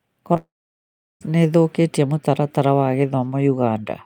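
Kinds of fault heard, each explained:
Short concealed packet loss: At about 0.33 to 0.37 s, roughly 20 ms of audio failed to arrive, and the decoder patched about 13 ms of that gap by extending the preceding sound before crossfading back. It registers as a tiny smear or wobble. On a spectrogram the harmonics or noise texture run on unnaturally smooth for a few milliseconds. The waveform shows a short continued stretch with a slight seam where real signal resumes.
Long network dropout: From about 0.37 s to 1.23 s the sound breaks off. A brief continuation of the last sound fades out, followed by roughly 0.73 s of silence, and speech resumes mid-flow at "nĩĩthũkĩtie mũtaratara wa". The likely cause is about 0.84 s of audio lost in transit. A spectrogram shows a decaying smear, then a blank band. The waveform shows a tapering tail collapsing to a flat line before the abrupt return.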